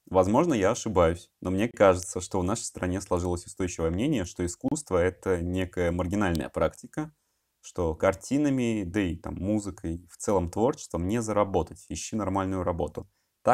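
At 1.71 s a gap at a join of encoded pieces cuts about 28 ms of silence into the speech. Separately encoded segments were joined with their encoder padding left in, and the speech resumes where it stopped. On the waveform it is a flat dropout with slightly smeared edges. At 2.03 s an electrical switching spike adds a sharp snap, likely from a nearby switch arcing. It shows as a thin full-band vertical line on the spectrogram. A second join gap, about 32 ms, follows at 4.68 s, and another spike snaps at 6.35 s.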